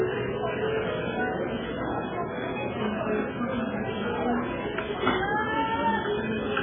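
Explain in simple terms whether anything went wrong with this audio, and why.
Throughout the whole clip, the sound is dull and muffled, with a watery, swirling quality and smeared sharp edges. Nothing above about 3.5 kHz survives. This is likely heavy MP3 compression: squeezed too hard, the encoder discards the treble and fainter detail.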